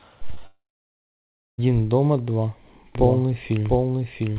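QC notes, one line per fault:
0.34–0.39 s and 0.39–0.42 s, short concealed packet loss: two back-to-back gaps of about 20 ms each were filled with a continuation of the preceding sound, heard as a brief smear or wobble. Unlike a dropout, the sound never goes silent and resumes within hundredths of a second.
0.46–1.60 s, long network dropout: the sound carries on briefly as a fading buzz or hiss, then drops to silence for about 0.96 s before returning with that stretch missing. The likely cause is a network outage concealed by continuing the last sound. Its length and silent tail set it apart from short packet loss.
2.95 s to end, doubled audio track: a second copy of the sound enters abruptly and runs roughly 0.7 s behind at about the same level. It is likely a duplicated capture or an out-of-step edit. It has the same full 4 kHz band with no decay or room colouring, unlike a reverberant echo.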